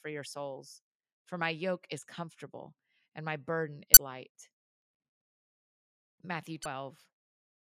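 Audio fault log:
3.94–3.97 s and 6.63–6.66 s, damaged data in a compressed stream: a brief glitch of about 30 ms each time, as corrupted frames are misread and the decoder loses sync. A spectrogram shows a short broadband smear, the waveform a sudden discontinuity.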